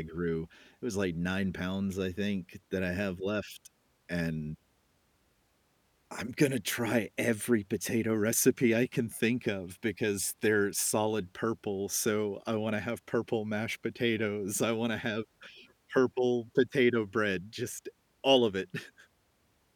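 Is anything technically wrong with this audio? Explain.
No, nothing technically wrong can be heard here.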